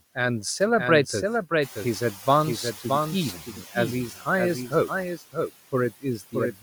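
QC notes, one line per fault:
Throughout: doubled audio track. A second full-band copy of the speech runs behind the original by roughly 0.7 s, only a few dB quieter. The repeat carries no reverb tail or room colour and stays at a steady offset, unlike an acoustic echo. It is likely caused by the signal being captured a second time through a slower path, or by an edit that left two copies out of alignment.
Throughout: noise suppressor artifacts. The suppressor lowers the background by about 16 dB, reducing each frequency band it judges to be steady noise, frame by frame. Between phrases the noise drops away, and under the speech it comes back up, so the floor pumps with the talking.
1.61 to 3.40 s: noise suppressor catching up. The room background jumps by about 12 dB at around 1.5 s. That rise is real room noise, not a system fault. The suppressor's noise estimate lags behind it, so for about 1.79 s the louder noise comes through with only about 8 dB of reduction. 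As the estimate adapts, the noise audibly sinks back down, producing a slow fade in the floor that has nothing to do with the room itself.
3.33 to 3.75 s, 4.10 to 4.26 s, 5.17 to 5.51 s, 5.91 to 6.34 s and 6.52 to 6.62 s: speech cut by the noise suppressor. In each window the suppressor mistakes parts of the speech for noise and turns them down along with the background. The drops are about 12 dB in the first two windows and about 15 to 17 dB in the last three. The affected speech sounds swallowed or faint.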